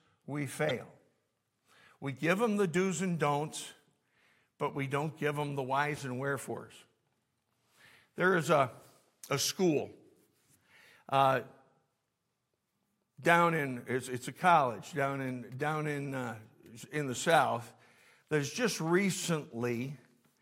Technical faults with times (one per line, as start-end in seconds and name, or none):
0.65-0.71 corrupt frame decoded
5.95-6.00 corrupt frame decoded
18.17-18.30 corrupt frame decoded